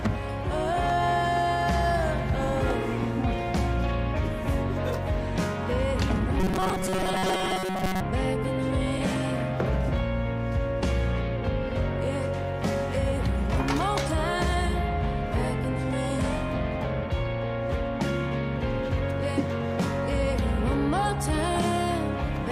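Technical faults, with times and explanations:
6.40 to 8.00 s, robotic sound from repeated short buffers. The sound turns into a stiff, metallic buzz at 188 Hz. It still roughly follows the shape of the audio, but its natural movement is gone. New audio was likely arriving too seldom, so a very short slice of about 5.3 ms was replayed over and over to fill the gaps. Most of the real audio in this stretch was skipped. The repeat rate sets the pitch of the buzz.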